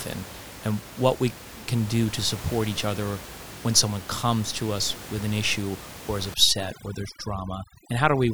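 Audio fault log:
6.34–8.34 s, overdone noise removal: right after "an issue or is", the background drops and breaks up into scattered twinkling specks through to the end. A noise reduction stage is set far too hard here. The room noise sits about 15 dB below the speech, and each frequency band that falls near that noise estimate is pushed down or switched off. The quieter parts of the speech share those bands and are cut away with the noise.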